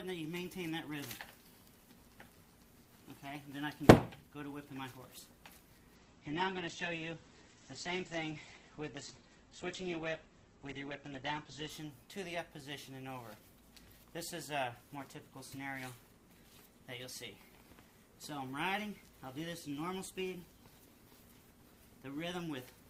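A call bitrate drop from 5.96 to 11.77 s leaves the audio coarse and watery with highs cut at 8 kHz, consistent with 48 kbps falling to 9 kbps.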